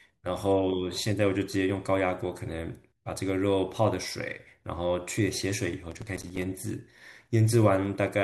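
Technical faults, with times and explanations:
5.91–6.42 s, processor overload crackle: a gritty, tearing crackle over the speech that stops when the load passes. The processor repeatedly failed to finish its audio buffers in time, leaving about fifteen hard-edged silent gaps, consistent with buffers of about 5 ms.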